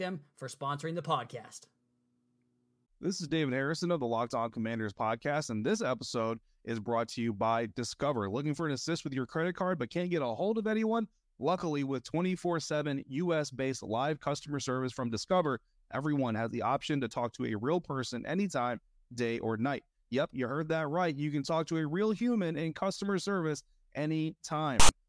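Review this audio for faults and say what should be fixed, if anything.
At 24.80 s, right at the end of the speech, a harsh burst of static cuts in. It stops abruptly at 24.89 s. This is file tags played as audio. A block of text tags was read as if it were sample data. Text bytes sit in a narrow numeric range. So they play back as a loud rasp pushed off centre, with hard edges at both ends. The tag block should be removed from the audio stream.

To prevent it, make the decoder or exporter parse and skip metadata blocks rather than passing them through as samples.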